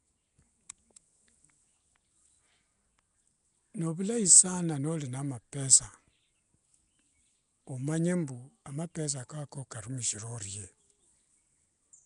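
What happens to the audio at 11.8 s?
At 11.8 s the speech carries the same degradation heard across the whole clip: a rough, hissy halo and a smeared, underwater quality, with nothing above about 10.6 kHz. This is likely Nellymoser compression. The codec codes 256-sample blocks at a fixed two bits per sample, gives no bits to weak bands, and fills those bands with noise. The plainly audible damage fits a rate of around 44 kbps.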